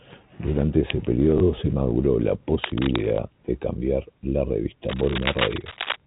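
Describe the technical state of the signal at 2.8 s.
At 2.8 s the speech carries cable scratch noise from 2.64 to 3.02 s, likely a worn connector or lead being moved so its contact resistance jumps erratically, adding dense, uneven scratchy bursts nearly as loud as the speech.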